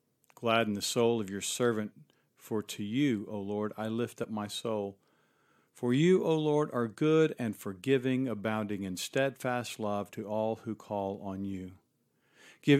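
At 4.23 to 4.25 s, compressed frames are skipped. About 20 ms of speech never plays, so the audio jumps forward with an abrupt join.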